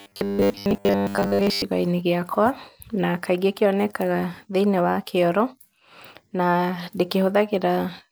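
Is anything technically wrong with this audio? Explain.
Yes. From 0.01 to 1.62 s the speech has robotic sound from repeated short buffers. New audio likely arrived too slowly, so playback kept reusing the last fragment of about 10 ms and skipped real material for most of this stretch. Those repeats impose a 100 Hz buzz, giving a stiff, metallic drone that only loosely tracks the speech. A spectrogram would show evenly spaced horizontal bands at multiples of 100 Hz, and the waveform would show identical 10 ms blocks repeating.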